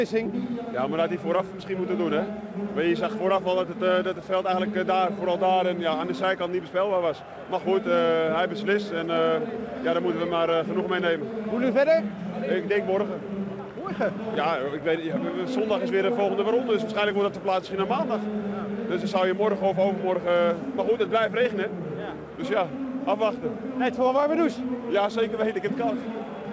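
No technical faults can be heard in this audio. It has passed through a working WebRTC call path, and nothing reaches above 8 kHz, which fits the G.722 wideband codec.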